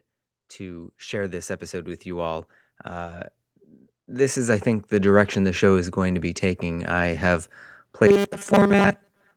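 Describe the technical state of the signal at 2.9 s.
Automatic gain rising: the gain control judged the input too quiet and raised it by about 8 dB from 0.57 to 3.27 s, so speech and background swell together.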